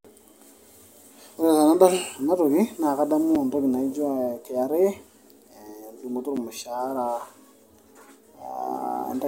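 A speech clip with two blocks of digital silence. At 3.35 s and 6.37 s, the sound drops out for 5.8 ms and 8.7 ms. Each gap is short enough to be heard as a tick or dip rather than as silence. The first fits an unfilled 256-sample buffer.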